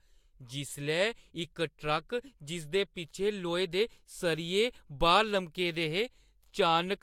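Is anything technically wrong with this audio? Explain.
No, nothing technically wrong stood out on listening to this speech recording.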